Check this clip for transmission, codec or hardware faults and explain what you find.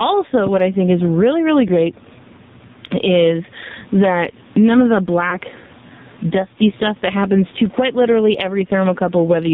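Three faults are present: gain pumping, heavy AMR narrowband codec damage and a lost AMR speech frame.

Gain pumping, throughout: loud and soft parts are pulled closer in level and the sound is squashed, a swing of about 15 dB, likely from excessive gain hitting a fast limiter. The waveform envelope looks flattened.

AMR narrowband mobile codec, throughout: nothing passes above 4 kHz, so the spectrogram is cut flat there. The speech sounds buzzy and synthetic, with heavy damage that points to a very low AMR-NB mode near 6 kbps.

Lost AMR speech frames, 5.30 to 5.38 s, just after "that none of the": the decoder repeated its last pitch and spectral settings at falling gain, consistent with one lost frame. It is heard as a brief warbly dip and seen as a smeared, weakened spectrogram slice.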